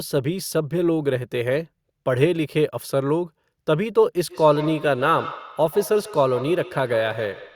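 Feedback echo between two devices runs from 4.28 s to the end of the clip. Two devices in the same room are on one call, so one plays back what the other's microphone sent and that microphone captures it again. Neither echo canceller removes the other device's output, so the speech returns after roughly 150 ms, thinner and more ringing, with the loudest repeats about 15 dB below the speech itself.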